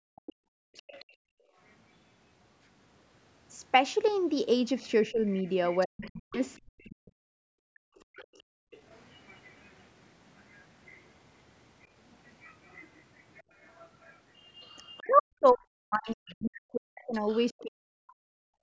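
From 0.00 to 1.56 s the echo canceller clamped the microphone while the loudspeaker played, so the background is gated, dipping by up to about 38 dB for roughly a second in total. Between 0.26 and 1.05 s the canceller likely left part of the far end in the microphone signal, so the other side's voice leaks through faintly, about 25 dB below the speech.

From 4.81 to 8.37 s both sides talk at once. The canceller likely could not tell the talker from the echo and turned everything down, so the speech is suppressed in double talk, dropping by roughly 40 dB in pieces for about two seconds overall. Inside that stretch, from 5.28 to 6.58 s, the other side leaks through again at about 25 dB below the speech, again likely from incomplete echo removal.

A longer leak runs from 7.98 to 16.15 s, the other side sitting about 30 dB under the speech, likely the canceller again failing to remove the loudspeaker signal. 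Within it, from 8.65 to 8.71 s, the canceller gates the background for about 70 ms, a brief hole of about 35 dB in the room sound.

From 14.99 to 18.53 s the speech is suppressed in double talk once more, likely because the canceller again mistook the talker for echo. It cuts out in pieces by roughly 40 dB for about three seconds in total. During this, from 17.13 to 17.63 s, the other side's voice leaks through at about 30 dB below the speech, likely for the same reason.

Throughout, the call microphone processing limits the sound to nothing above 8 kHz.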